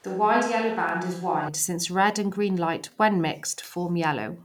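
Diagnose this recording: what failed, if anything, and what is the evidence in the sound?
Capture stage: until 1.48 s the speech sounds roomy, hollow and bass-light over faint room noise, then turns abruptly close. This is likely a switch to a distant microphone. Added reverberation, not just EQ, sets it apart.

Buffer stage: overlapping chunks replay about 25 ms at 0.89 s and 2.91 s, about two seconds apart. The repeated audio causes a stutter, unlike a dropout's gap.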